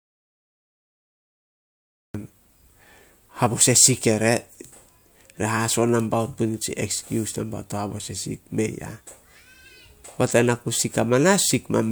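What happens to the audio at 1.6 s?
At 1.6 s there is nothing at all: complete silence, with no room tone, running from the very start of the clip until the speech cuts in at 2.15 s. This is an audio dropout to silence, likely from the input being lost while the recorder kept writing zeros.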